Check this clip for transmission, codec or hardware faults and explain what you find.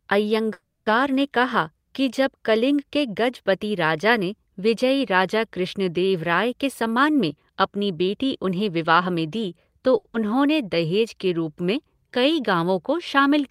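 The clip has four transmission faults, all in how the receiver handled late or missing packets.

Call audio freeze, 0.53 to 0.88 s: the receiver likely ran its jitter buffer dry while packets were held up. It extended the last sound for about 330 ms, fading to silence for the final 90 ms, then resumed where it stopped. Nothing is lost, but the stream now runs 330 ms later.

Jitter buffer speed-up, 6.59 to 9.80 s: with too much audio queued, the receiver repeatedly cut out pitch-period-sized slices, removing roughly three tenths of a second. The speech plays at 110% speed with unchanged pitch and sounds hurried.

Short stall from a late packet, 9.98 to 10.07 s: a packet arrived after it was due and the buffer emptied. The receiver held the current sound for 70 ms until it came in, then carried on. The result is a briefly stretched sound with a faint buzz or dip, and nothing is skipped.

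Short concealed packet loss, 10.13 to 10.16 s: 40 ms of audio never reached the decoder. The receiver patched only 10 ms by continuing the previous sound and blended back, so the delay shrinks by about 30 ms. This is heard as a tiny smear or wobble where a fragment drops out.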